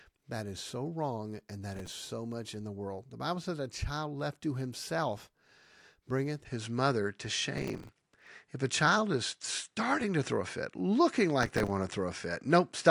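It's a speech clip with two problems. Processor overload crackle shows up three times: 1.74 to 2.00 s, between "so wrong and that" and "much in the world", then 7.58 to 8.27 s, then 11.43 to 11.70 s. Each burst is gritty tearing from runs of missed deadlines, where stale audio is replayed in chunks of about 3 ms. From 6.45 s to the end the sound turns duller, with nothing above 10.5 kHz, a level shift of about 5 dB and a faint new noise floor. There's no gap at the switch. That's most likely the input switched to a poorer device.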